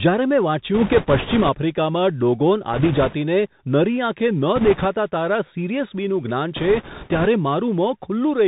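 Throughout the speech, everything above 4 kHz is missing, s sounds come out scratchy, loud bright passages distort, and a granular hiss sits underneath. That is the Bluetooth CVSD headset codec, which fits a 64 kbps stream: a one-bit up-or-down code whose adaptive step cannot keep pace with fast, loud high-frequency movement.

Just after "જ્યારે મેં", from 0.75 to 1.50 s, a rushing, crackly noise rises over the speech. It returns from 2.73 to 3.16 s, from 4.56 to 4.86 s, and from 6.56 to 7.28 s. These are bit errors on a Bluetooth voice link, at a rate of a few percent. Each flipped bit carries the same small weight and its effect fades quickly, so the errors produce a rough wash rather than sharp clicks.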